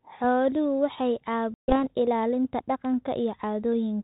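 At 1.54 s the speech drops into an abrupt, hard-edged silence lasting about 140 ms. When it resumes, the texture is briefly wrong, with some roughness, before it settles by about 1.84 s. This is packet loss on an ADPCM call. Around seven packets went missing from the 32 kbit/s G.726 stream, and the decoder's adaptive predictor and step size drifted away from the sender's until they realigned.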